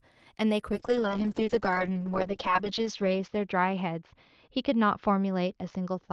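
Speech that, from 0.72 s to the end, turns rough and watery and loses its top end, the cutoff dropping from 12 kHz to 8 kHz. This is a call bitrate drop: the Opus encoder was starved of bits, which fits a fall from 40 kbps to 6 kbps, staying at the bottom for about 1.7 s.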